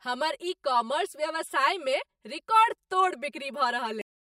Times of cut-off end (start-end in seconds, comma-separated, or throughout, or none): 4.01-4.31